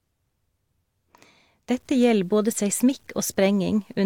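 From 1.70 s to the end of the clip, the speech has likely been reduced to a low bit depth without dither, and the grain fits truncation to about 9 bits. Because no dither was added, the rounding error tracks the waveform instead of spreading out as a steady hiss. Quiet passages and decaying word endings turn gritty and rough, with a grainy distortion roughly 45 dB below the speech that changes as the voice does.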